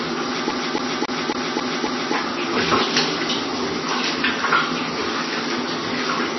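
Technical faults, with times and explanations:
Throughout: MP3 compression. The audio sounds dull and watery, with nothing above 5.9 kHz and swirling where weak detail flickers in and out. This is likely heavy MP3 coding at a very low rate, around 23 kbps, where the encoder cuts the treble and drops quieter frequency content.
0.51–2.14 s: CD stuck on one turn. A fast, even stutter repeats the same 0.27 s slice six times, with a brief mute at each jump. This is a skipping disc, where the laser is thrown back to the same spot on every rotation.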